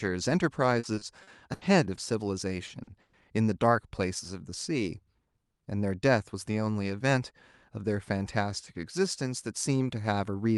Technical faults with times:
0.79-1.99 repeated packet loss (robotic sound)
2.67-2.89 short concealed packet loss
3.01-3.15 burst of packet loss

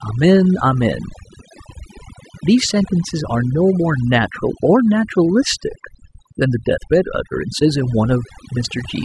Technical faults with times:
0.00-9.05 overdone noise removal

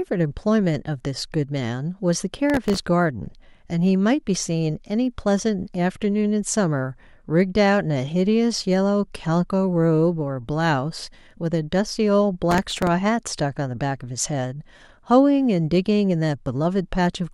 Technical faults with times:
2.50-2.83 processor overload crackle
12.51-12.87 processor overload crackle

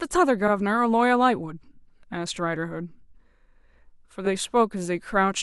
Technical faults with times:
0.47-0.51 repeated frames
4.25-4.30 repeated frames

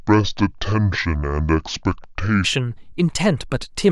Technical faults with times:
0.00-2.44 section at the wrong speed

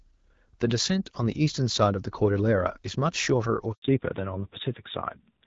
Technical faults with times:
3.72-3.82 handover gap
3.82-5.46 fallback to narrowband

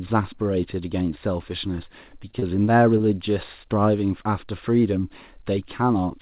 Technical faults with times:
2.31-2.35 short stall from a late packet
2.39-2.44 short concealed packet loss
2.98-3.05 short concealed packet loss

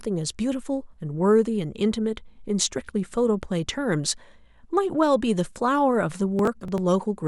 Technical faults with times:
6.39-6.78 processor overload crackle

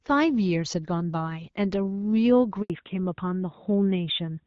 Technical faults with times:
2.62-2.70 handover gap
2.70-4.47 fallback to narrowband

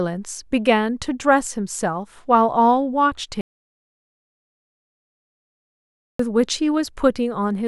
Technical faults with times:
3.41-6.19 audio dropout to silence

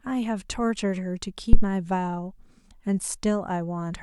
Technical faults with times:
1.53-1.67 phantom power thump

